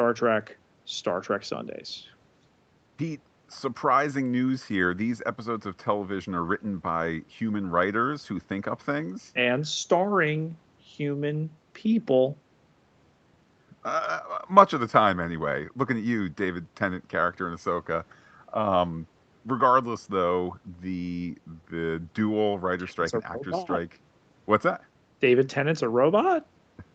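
Nothing goes wrong in this speech recording; it simply carries the narrower, call-like sound of having passed through ordinary call processing and a call codec, with nothing heard above about 8 kHz.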